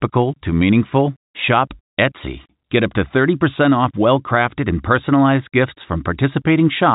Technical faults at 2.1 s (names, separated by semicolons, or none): none